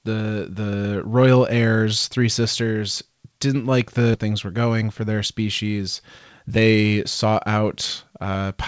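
A speech recording carried over a wideband call path, with nothing above 8 kHz. At 4.14 s, right after "three sisters didn't like", about a second of audio was discarded while later audio was already queued, a skip ahead. Playback jumps straight past the missing stretch with no gap or fill, so the words on either side are butted together. Soon afterwards the jitter buffer, holding more audio than its target, began trimming short pitch-period-length pieces again and again to bring the delay back down. This jitter buffer speed-up makes the talker sound hurried while the pitch stays the same. It runs at about 111% from 4.23 to 5.18 s, removing roughly a tenth of a second, then at about 116% from 6.19 to 7.64 s, removing around a fifth of a second, and at about 111% again from 8.10 to 8.56 s, removing a few tens of milliseconds.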